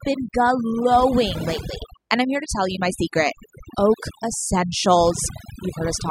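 Overdone noise removal runs through the whole clip: a noise reduction stage set far too aggressively shuts individual frequency bands whenever they sit close to its noise estimate, taking quiet parts of the voice with them. The gaps fall to near silence with twinkling specks.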